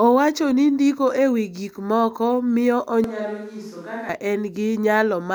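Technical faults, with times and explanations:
3.04–4.09 s, switch to a distant microphone: Right after "wi gik moko miyo" the speech turns abruptly hollow and thin, about 10 dB quieter, with more room noise. A farther microphone was likely used.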